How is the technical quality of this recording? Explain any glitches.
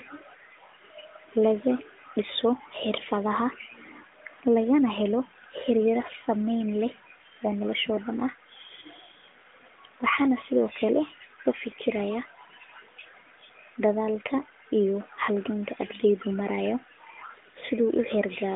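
No glitches or dropouts can be heard in the recording. It carries the narrow band of a mobile call through the AMR narrowband codec, with nothing above about 3.7 kHz and only light coding texture, which fits the codec's 12.2 kbps top mode.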